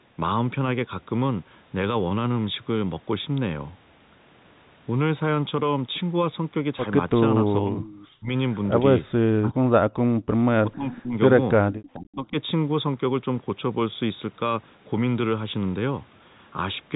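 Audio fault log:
7.43–7.86 s, speech suppressed in double talk: the voice sinks by roughly 25 dB, likely the echo canceller ducking both talkers at once.
7.85–8.06 s, echo leak: a faint copy of the voice returns about 454 ms late, about 25 dB down, likely from incomplete loudspeaker echo removal.
8.15–8.31 s, speech suppressed in double talk: a brief, deep cut of about 40 dB.
9.33–9.97 s, speech suppressed in double talk: the longest dropout, reaching about 40 dB while both sides overlap.
10.25–10.33 s, background gated by the echo canceller: only the room tone drops out, by about 40 dB for roughly 70 ms, then snaps back.
10.62–11.16 s, speech suppressed in double talk: the voice dips by roughly 25 dB.
11.73–11.89 s, echo leak: a short delayed echo again about 454 ms behind and about 25 dB down. The fixed delay suggests it is likely a returned copy.
11.95–12.34 s, speech suppressed in double talk: the voice is pushed down by roughly 30 dB during overlapping talk.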